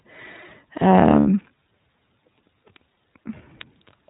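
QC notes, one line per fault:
Throughout: iLBC codec. The speech is band-limited to narrowband, so nothing above 4 kHz comes through and it sounds thin and boxy. Each frame's excitation is coded on its own, which leaves a plainly audible rough, slightly synthetic grain on every syllable. The damage level and texture fit the 30 ms frame mode at around 13.3 kbps. It is plain speech coding damage, not noise in the recording.
1.20 to 1.26 s: lost iLBC frames. About 60 ms of signal is missing, which fits two consecutive 30 ms frames dropped in transit. The decoder fills the hole by repeating the last pitch cycle blended with noise. So the gap is heard as a brief held, faintly buzzy vowel rather than silence. Because each frame decodes independently, the speech snaps back to normal right after 1.26 s.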